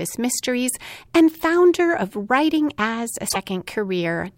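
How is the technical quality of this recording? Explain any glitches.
One glitch mars the recording, late in the speech. Damaged data in the compressed stream hits from 3.25 to 3.36 s, a span of about 0.11 s. Part of the encoded data there is corrupted, so the decoder misreads those frames, loses its place in the stream, and has to hunt for the next valid frame header before normal playback can resume. That brief breakdown comes through as a short chirp, squawk, click or hole cutting into the speech.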